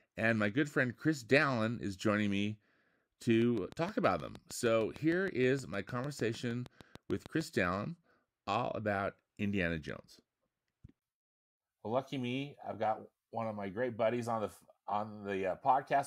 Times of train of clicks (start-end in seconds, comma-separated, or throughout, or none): 3.42-7.42